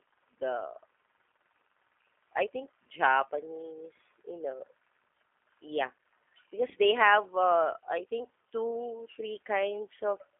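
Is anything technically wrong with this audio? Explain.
Yes. Throughout, the speech carries G.729 codec damage: it is rebuilt from a filter model, pitch prediction and a few pulses per frame, at a rate that fits 8 kbit/s, so it sounds rough and synthetic with nothing above 3.6 kHz. Unlike plain telephone band-limiting to 250 Hz to 3.5 kHz, the voice itself sounds buzzy and artificial, not just muffled.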